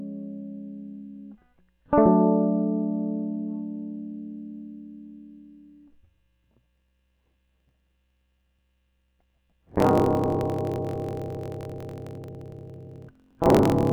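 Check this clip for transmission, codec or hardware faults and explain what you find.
There is one fault, a block size mismatch (truncated), running from 6.71 s to the end of the music. One stage hands over longer blocks than the next stage accepts, and the tail of each block is discarded. The sound fits 1024-sample blocks being cut short. The regular cuts produce a 45.9 Hz buzz, and the music plays about 1.07 times faster with its timbre kept. A spectrogram shows vertical lines spaced about 22 ms apart, and the waveform shows steps at each cut.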